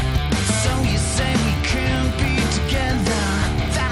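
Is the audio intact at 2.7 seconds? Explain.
No. The resampler was restarted on every block throughout the clip, including at 2.7 s. The 24 kHz to 48 kHz conversion treated each 20 ms block in isolation, so at each block edge the filter saw silence or the wrong end of the block instead of the true neighbouring samples. That small error, repeating 50 times a second, is heard as a low buzz at 50 Hz riding on the sound whenever signal is present.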